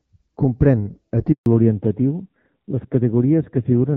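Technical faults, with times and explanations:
1.32 to 1.46 s, handover gap: the speech fades out within a few tens of milliseconds and stays silent for 140 ms while the call switches networks and no speech frames arrive, so whatever was said in that stretch is simply missing. On the waveform the envelope collapses to a flat line. On the spectrogram a clean vertical blank band cuts across all frequencies before energy resumes on the new link.
1.46 s to the end, fallback to narrowband: after the handover the call drops from HD Voice to an older narrowband codec. Nothing remains above 4 kHz, so the speech turns duller and rougher, with a coarseness that fits a low narrowband rate around 7.4 kbit/s. Before the gap, the AMR-WB HD Voice coding at about 12.65 kbit/s carries energy up to 7 kHz with only light coding damage. On the spectrogram the upper band is abruptly cut off at 4 kHz from 1.46 s onward.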